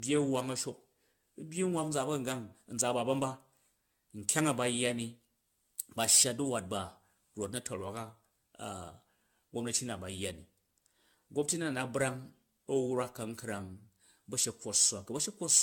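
From start to finish the speech sounds swirly, hollow and smeared, with blurred consonant attacks and nothing above 17 kHz. That is more damage than a single AAC-LC pass near 96 kbit/s would cause, pointing to generation loss, likely from re-encoding about ten times.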